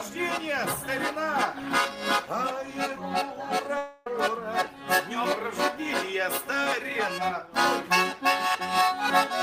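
At 3.77 s the flow of audio breaks off, most likely a long network dropout, and about 290 ms of the sound is never played. The receiver covers the gap by stretching out the last sound it had, so from 3.77 to 4.07 s a smeared, buzzy continuation replaces the real audio and fades as it goes, without ever falling fully silent. At 4.07 s the sound resumes further along, with the lost portion skipped.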